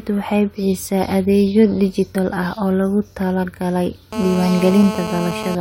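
At 2.15 s, just before "ah oo loogu talagalay", there is damaged data in the compressed stream. Some bytes in the encoded speech were corrupted. The decoder misread the frames at that point, lost sync and searched for the next valid frame header. The result is a brief glitch lasting about 16 ms.

From 4.13 s to 5.55 s, after "ah oo loogu talagalay", a GSM phone buzz sits under the speech. A nearby 2G handset was on a call and transmitting in bursts about 217 times a second. The audio circuit rectified those radio pulses into sound. It is a hard, raspy buzz at 217 Hz, rich in harmonics. It stays nearly steady and does not follow the speech. It is loud, only about 8 dB below the speech.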